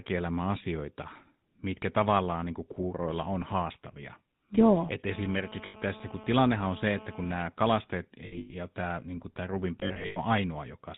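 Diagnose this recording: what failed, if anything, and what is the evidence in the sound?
Codec stage: GSM full-rate coding runs throughout. The speech is buzzy and gravelly, with nothing above 4 kHz, which fits the 13 kbps pulse-excited coder.

Analogue wiring: GSM phone buzz runs from 5.11 to 7.42 s. It is a hard, steady 217 Hz rasp, about 18 dB below the speech, from a nearby phone in a call whose radio bursts the audio circuit rectifies.

Network stage: lost GSM frames at 5.66 to 5.76 s, 8.26 to 8.55 s (just before "ja tämä niinku"), and 9.80 to 10.18 s. Each gap becomes a rough, metallic ring as the last good frame repeats. The later two are scattered losses, with runs up to about a tenth of a second.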